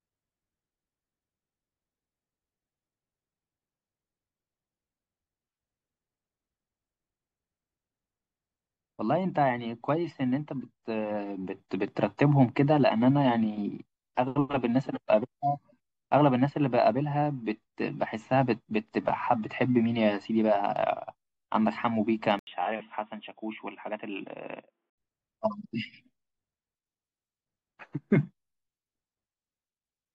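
Input switched to a poorer device, 22.39 to 24.98 s: after an 80 ms gap, speech turns dull and quieter, nothing above 3.8 kHz, likely a narrower microphone.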